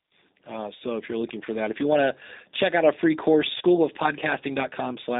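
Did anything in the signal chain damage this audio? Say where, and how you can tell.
Yes. At the codec stage, the whole clip passes through G.729 at 8 kbit/s: the speech is band-limited to roughly 250 Hz to 3.7 kHz and rebuilt from a vocal tract filter and sparse pulses, so it sounds plainly rough, thin and slightly synthetic throughout.

On the network side, VoIP packet loss concealed by the speech codec hits at 3.58 to 3.63 s. About 30 ms of audio went missing and the decoder extrapolated from its last pitch and filter, giving a brief stretched, fading stretch and weak or smeared sound as it recovers.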